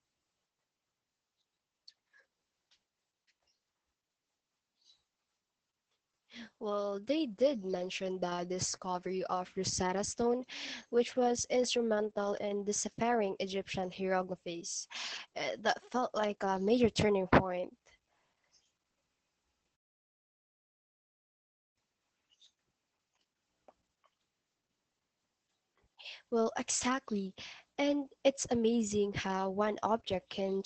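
Throughout, Opus voice compression leaves the speech muffled and hoarse, consistent with SILK coding at about 10 kbps. The spectrogram shows nothing above 8.7 kHz.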